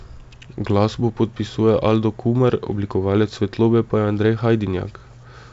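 No faults can be heard in this wideband telephone speech.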